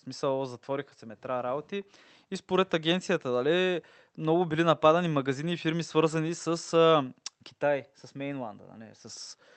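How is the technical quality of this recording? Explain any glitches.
Nothing stood out on listening to this speech recording, which comes through a call path with no glitches to explain.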